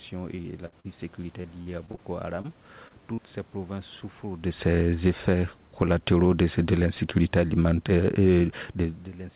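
Choppy stretches of speech open the recording, from 0.36 to 0.86 s and again from 1.42 to 1.99 s. In each, the sound keeps breaking into short fragments with bits missing. This is repeated packet loss (robotic sound). The first stretch has four holes, about 140 ms patched in total and the longest 62 ms, so roughly 28% of that half-second is concealment. The second has five shorter holes, up to 40 ms, covering about 20%. The receiver fills each gap by extending the last sound, and the gaps come too close together for those patches to pass unnoticed.

Three isolated blips follow, at 2.41 to 2.46 s, 2.88 to 2.92 s and 3.14 to 3.20 s. Each is a brief smear or wobble, and the last is the longest at about 38 ms. These are short concealed packet loss. A few tens of milliseconds arrived too late, and the gap was bridged by continuing the preceding sound before fading back into the real signal. 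A brief consonant in those spots can be lost.

From 4.99 to 9.09 s the level slowly sinks by about 5 dB, with the background dropping along with the speech. That is automatic gain falling. The gain control judged the input too hot, or its background noise too strong, and eased its gain down gradually. It runs alongside the talker's own shifts in distance around 4.5 and 9.0 s, all within a band that stops at 4 kHz, which fits a G.711 narrowband call.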